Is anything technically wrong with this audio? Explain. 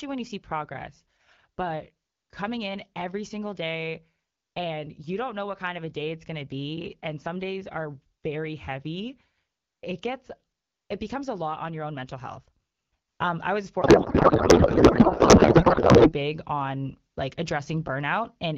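Yes. A codec payload misread runs from 13.81 to 16.14 s, starting after "I was" and ending before "on like". The AMR frames were packed octet-aligned but decoded as bandwidth-efficient, so the fields sit at the wrong bit positions. The speech there is replaced by garbled noise and warble that barely tracks it. Around this, the AMR-WB codec at 12.65 kbit/s leaves only light coding damage.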